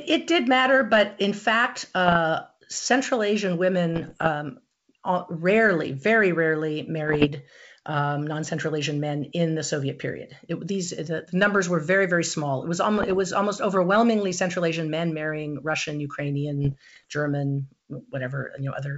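Bit errors on an ADPCM link hit this speech at 2.06–2.17 s after "matter but in fact", 3.94–4.28 s, 7.08–7.28 s after "rarely very rarely", 12.98–13.20 s before "almost overwhelmingly", and 16.65–17.05 s. Each burst is pops and rough crackle with brief level jumps that ring on briefly, because a flipped bit throws off the decoder's step size and predictor. Unlike a plain click or dropout, the damage smears over following milliseconds rather than staying a single tick or gap. The G.722 wideband coding at 64 kbit/s carries the rest cleanly up to 7 kHz.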